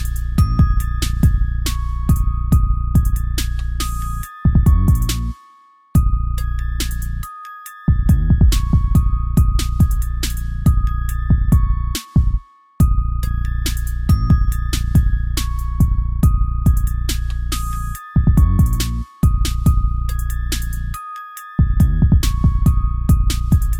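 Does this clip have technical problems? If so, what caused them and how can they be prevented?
No, nothing in this recording points to a technical fault, so there's no cause to trace and nothing to prevent.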